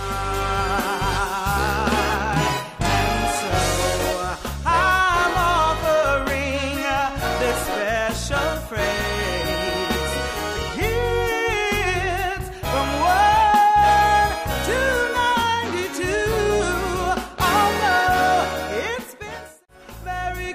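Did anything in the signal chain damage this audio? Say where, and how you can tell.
No, nothing in the signal chain has damaged this audio. I can't point to any stage, from capture through to playback, where the sound has been altered or broken.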